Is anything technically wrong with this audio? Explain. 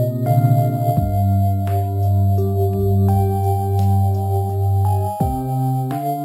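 Yes. Throughout the music there's imaging from sample-and-hold upsampling. It was raised from 12 kHz to 44.1 kHz by simply repeating samples with no smoothing, so mirrored copies of the spectrum land from 6 to 12 kHz and up, about 28 dB down. You hear a metallic fizz that follows the level.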